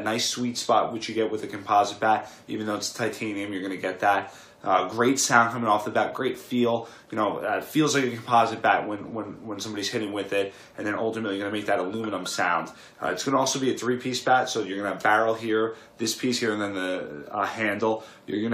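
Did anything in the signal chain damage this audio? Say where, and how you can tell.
No, nothing in the signal chain damaged this audio.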